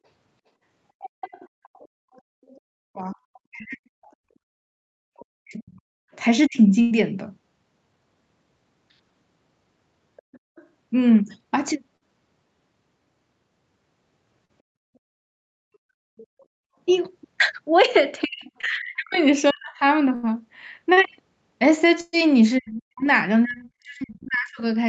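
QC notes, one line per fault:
1.03–6.16 s, 10.16–10.66 s and 16.18–19.54 s: other side's voice leaking through. Likely cause: the far end's loudspeaker audio reached the microphone and the echo canceller left a residue. A second voice sits under the talker, about 20 dB down in the first stretch and about 30 dB down in the later two.
2.67–6.69 s and 18.24–24.62 s: speech suppressed in double talk. With both sides talking, the echo canceller likely could not separate the talker from the echo and turned everything down. The talker's voice dips and breaks up in pieces, by as much as about 40 dB, for roughly one and a half seconds in the first span and roughly three seconds in the second.
6.81–6.93 s, 20.15–20.25 s and 22.01–22.15 s: burst of packet loss. About 100 ms, 80 ms and 120 ms of audio never arrived in time. The receiver stretched the last sound into a fading buzz or hiss, then jumped ahead with that stretch missing. 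The last gap includes a brief silence of about 10 ms.
11.97–12.03 s, 14.45–14.51 s, 18.61–18.65 s and 20.93–20.99 s: short concealed packet loss. Between 20 and 40 ms went missing each time. The decoder patched the hole by extending the previous sound, leaving a brief smear or wobble where a short sound can drop out.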